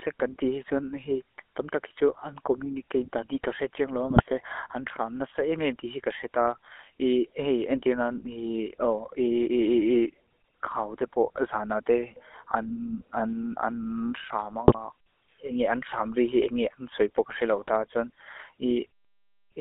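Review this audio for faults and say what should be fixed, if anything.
GSM full-rate codec throughout: the speech is confined to 300 Hz–3.4 kHz and has the buzzy, gravelly roughness of pulse-excited vocal-tract coding, consistent with a 13 kbps full-rate link. To prevent it, capture over a wideband or direct recording path instead of a GSM call.

GSM bit errors at 4.09–4.23 s and 14.68–14.91 s: corrupted filter, pitch and gain parameters distort the spectrum and level for a few frames, causing brief squawks and gargling. To prevent it, record over a strong, stable link with adequate signal margin.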